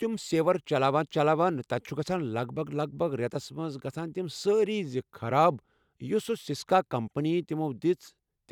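Speech recording with no audible technical faults anywhere.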